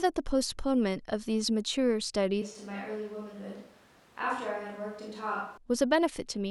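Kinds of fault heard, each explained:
switch to a distant microphone: 2.42 to 5.57 s, the speech abruptly turns hollow, roomy, quieter and noisier, likely from a farther microphone replacing the close one.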